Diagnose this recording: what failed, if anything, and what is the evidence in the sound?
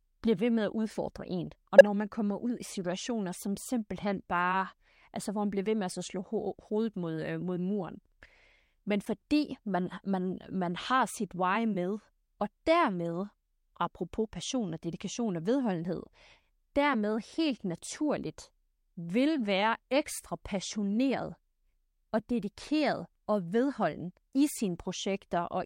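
Corrupt frame decoded at 1.78–1.85 s (just before "man kommer ud i"), 3.33 s (after "kommer ud i situationer"), and 9.02–9.08 s (before "man man man har"). A codec-stage fault: damaged frames were decoded, throwing misplaced spectral energy as bursts, loud at first (about -5 dBFS), faint later.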